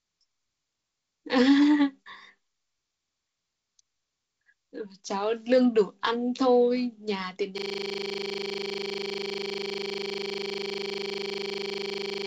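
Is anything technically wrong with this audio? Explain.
Yes. From 7.58 s to the end, a system hang loop replaces the speech. The system stalled while the audio hardware kept replaying one 40 ms stretch of its ring buffer over a hundred times, producing a steady 25 Hz buzz instead of speech. The wideband telephone coding underneath, which tops out near 7.7 kHz, shows up as a light upper-band hiss.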